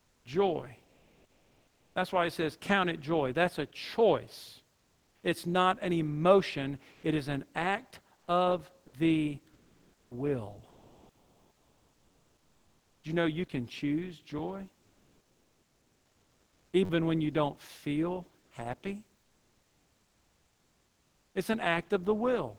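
Comfort noise in place of the background appears in this speech recording at 0.00–1.95 s, 4.75–5.23 s, 6.93–7.03 s, 14.81–16.73 s and 18.41–18.51 s. The real ambience, which sits about 40–45 dB below the loudest passages, gives way to a smooth, detail-free hiss. That hiss is about 4 dB quieter in the second stretch and about 2–3 dB louder in the last three. It is likely Opus discontinuous transmission, with the receiver synthesising noise while the sender goes silent. An onset clipped by the voice detector is heard at 0.20–0.25 s, where about 50 ms of the opening is missing and the sound starts abruptly. The detector was likely slow to register activity, so that first moment never went out. Sound chopped by the voice detector runs from 8.17 to 13.04 s. Roughly 3.1 s in total is swapped for fill, likely as transmission switches on and off. A repeated buffer occurs at 12.12–12.14 s (two extra plays), at 14.39 s (one) and at 16.85–16.90 s (four). 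Each is a rapid stutter or buzz of identical 10.7 ms slices, which fits a 512-sample buffer being replayed when fresh audio arrived late, with nothing evidently lost.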